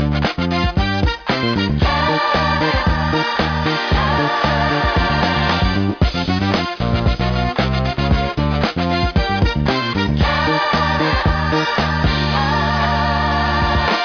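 No faults detected anywhere in the clip.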